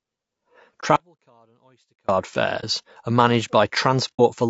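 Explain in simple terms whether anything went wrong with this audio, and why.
Several things went wrong with this speech recording.

Throughout the clip the voice sounds rough and grainy, with a noisy fuzz between the tones and a thin, artificial top end. That points to low-delay AAC compression, the kind used in video calls, likely squeezed too hard. It chops sound into very short slices to keep delay down, which makes fine pitch detail hard to capture. Unlike the other faults here, this damage never comes and goes: it colours every moment.

There are brief soft holes at about 0.80 s, 2.60 s and 4.15 s. The first two last about 30 ms, and the last about 60 ms, which fits one and then two lost chunks of data. This is AAC frame loss with muting. The decoder filled each missing piece with silence, so the sound fades out and back in smoothly. The holes are too short and soft-edged to be mistaken for the longer break.

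From 0.96 s to 2.09 s, about 1.1 seconds, the sound suddenly drops away and then suddenly returns. This is an audio dropout to a faint residue. The gap is not true silence, because a very faint sound remains, far below the normal level. That suggests the signal was likely lost somewhere upstream while the rest of the chain stayed switched on. The abrupt edges set it apart from a natural pause or a fade, and its length sets it apart from the short frame losses.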